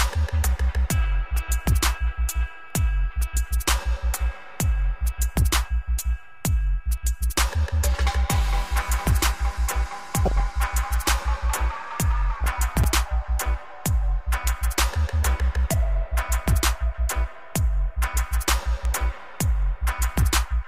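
At 10.25 s a short burst of DAB burbling begins. It lasts until 10.40 s. Bit errors have slipped past the error correction into the MP2 data. Corrupted samples put short blips of noise in single sub-bands, and corrupted scale factors make sub-bands leap in level for up to a frame. The result is blips of noise and jumps in level within single sub-bands. A second burst follows from 12.38 to 12.48 s. Both are brief, with rough bit error rates of about 0.4% and 0.3%.

At 12.84 s there is a repeated buffer. New audio arrived late, so the device replayed its last buffer. The same tiny slice sounds three times in a row, with a hard join at each repeat. The slice is very short, which fits a buffer of about 5 ms. So it is heard as a quick click or buzz, not a stutter. No audio appears to be lost.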